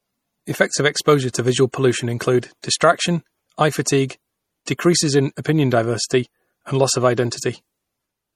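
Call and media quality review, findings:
Watery, swirly speech, treble gone above 17.1 kHz throughout; likely MP3 compression, bitrate starved, fits roughly 48 kbps, weak frequency lines dropping frame to frame.

Brief hiss smearing attacks at 1.33 s (before "visual pollution"), 2.62 s (before "distraction eye"), 4.66 s (before "decreases in opinion diversity"); pre-echo, block quantisation noise spreading 14 to 16 ms ahead.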